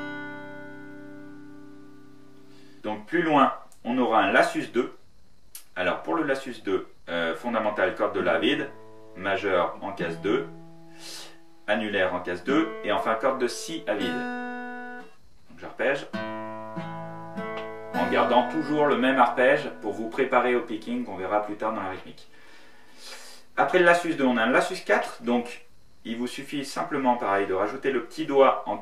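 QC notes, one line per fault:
No fault found for the QC notes.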